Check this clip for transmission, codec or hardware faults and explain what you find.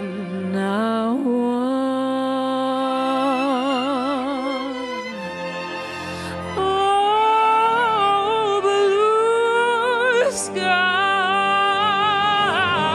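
One fault is present. From 6.58 s to the end, a section at the wrong speed plays at 0.893x, likely from a clock mismatch. Pitch drops about two semitones and everything drags.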